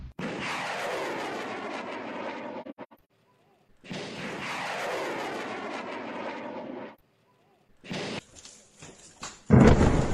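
Between 2.62 and 2.93 s the sound breaks up into a cluster of short holes, a case of AAC frame loss with muting. Several coded frames went missing and the decoder replaced each with silence, about 0.3 s of gaps in total, the longest around a tenth of a second. Unlike a hard dropout, each gap fades in and out gently because the overlapping transform windows smear the edges.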